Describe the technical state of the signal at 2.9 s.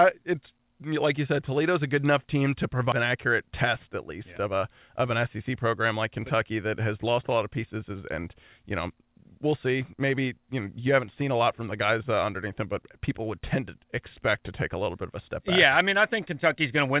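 Right after "good enough team to" there's a skip ahead at 2.92–2.94 s: roughly 0.7 s of audio got dropped, and playback jumps straight to later sound with no gap.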